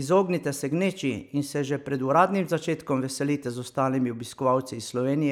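No technical faults are audible anywhere in this speech.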